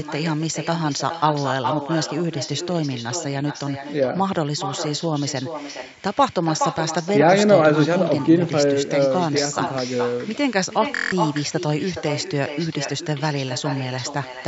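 From the first second to the last, the speech carries an echo with no canceller. Each phrase returns roughly 0.4 s later, about 7 dB quieter and thinner, because a far-end loudspeaker is feeding a microphone and nothing subtracts that copy. On a spectrogram, every syllable has a fainter, blurred twin offset to the right by that gap. The waveform shows envelopes smeared into the pauses where silence should be.

At 10.96 s comes a Bluetooth stutter lasting until 11.12 s. About 0.16 s of audio goes missing, which fits roughly seven lost packets. The receiver repeats its last short slice while it waits, producing a rapid buzzing, machine-gun stutter. The sound then picks up further on as though it had continued playing. The waveform shows a short, identical cycle tiled across that span. The spectrogram shows evenly spaced vertical stripes there, under the call path's normal 8 kHz ceiling.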